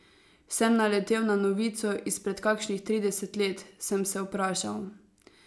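Speech recording with no audible technical faults.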